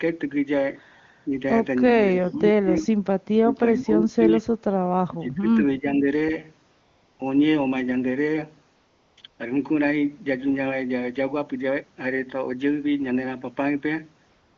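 From 1.26 s the speech level dips, briefly and shallowly at first, then by around 20 dB at 2.14–2.86, 3.41–4.47 and 5.06–6.09 s, where the talker fades. This is likely speech suppressed in double talk: the echo canceller, unable to separate near speech from far-end echo, attenuated both.

AMR comfort noise appears at 6.71–7.19, 8.75–9.17, 9.21, 9.27–9.39 s and from 14.29 s to the end. With no speech frames sent, the receiver substitutes smooth synthetic noise, which switches abruptly in and out and replaces the real background.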